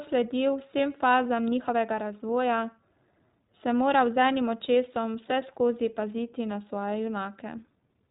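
Speech, with iLBC codec damage heard plainly throughout. Nothing survives above about 3.8 kHz, so the voice sounds narrowband and muffled, and a rough, synthetic grain runs through it. That grain fits a codec that rebuilds each 20 ms frame's excitation independently, likely the 15.2 kbps mode. On a spectrogram, energy stops at a flat ceiling near 3.8 kHz.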